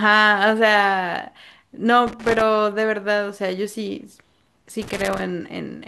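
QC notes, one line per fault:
2.07–2.41 s and 4.82–5.21 s: loose connector crackle, irregular scratchy bursts as a worn contact rapidly breaks and remakes, chopping the speech signal.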